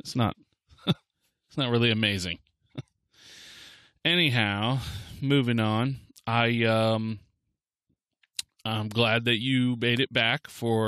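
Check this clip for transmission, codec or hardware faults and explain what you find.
No transmission, codec or hardware faults can be heard anywhere in the speech.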